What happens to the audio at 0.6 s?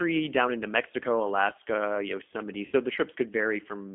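At 0.6 s the speech carries G.729 codec damage, present from start to finish rather than at that moment alone. The signal is confined to a telephone band of roughly 250 Hz to 3.4 kHz, and the speech has been rebuilt from a vocal tract filter, a pitch predictor and a few sparse pulses per short frame. The result is intelligible but plainly rough and synthetic, which fits an 8 kbit/s G.729A stream.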